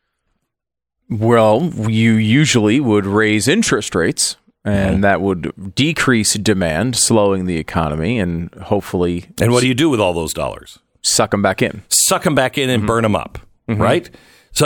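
No technical faults heard anywhere in the speech; nothing to flag.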